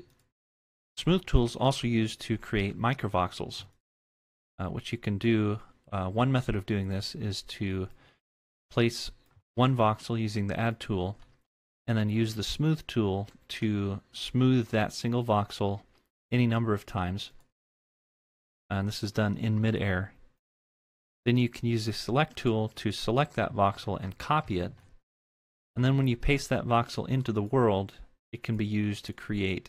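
Nothing technical stands out in this audio at any point; it's a clean listen with no faults to report.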